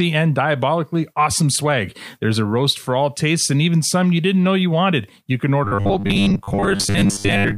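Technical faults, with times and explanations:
5.65 to 7.58 s: robotic sound from repeated short buffers. The speech becomes a rigid, metallic 100 Hz buzz until the end. New audio likely arrives too slowly, so a chunk of about 10 ms replays. Most real audio is skipped.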